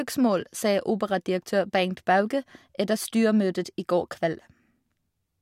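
No technical faults can be heard anywhere in the speech.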